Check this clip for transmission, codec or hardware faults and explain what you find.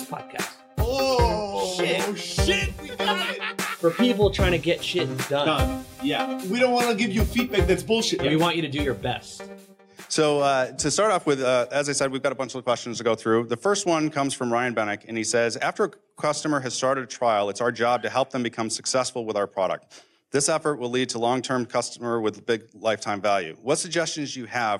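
Nothing in the clip points to a fault anywhere along the signal chain. There is no event here to time or explain.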